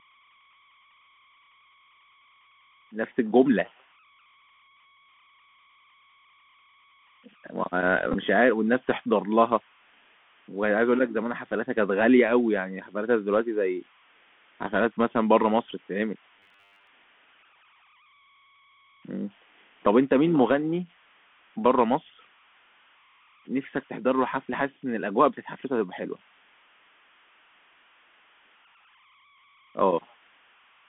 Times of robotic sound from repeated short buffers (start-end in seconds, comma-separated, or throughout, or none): 16.40-16.87